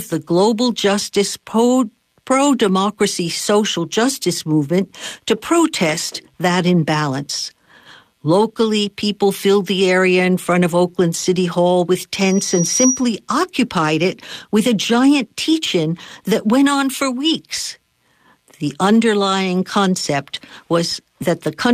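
From 12.16 to 13.09 s, just before "occupied it with a", a loudspeaker feedback squeal rises at 5.8 kHz. It swells over about three quarters of a second to a few dB above the speech, as the loop's gain exceeds one. That self-building swell sets it apart from a steady interference whistle.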